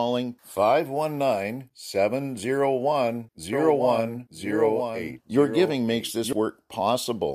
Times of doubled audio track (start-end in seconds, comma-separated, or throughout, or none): 3.53-6.33